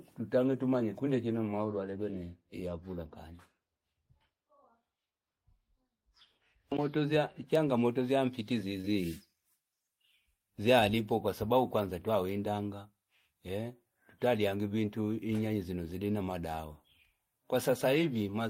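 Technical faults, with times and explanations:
8.81 to 8.86 s, short concealed packet loss: about 20 ms of speech never arrived, and the receiver filled it by extending the preceding sound, leaving a brief smear rather than a silent gap or hard click.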